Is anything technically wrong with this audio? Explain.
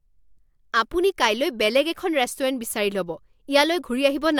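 No, nothing technically wrong stood out on listening to this speech recording.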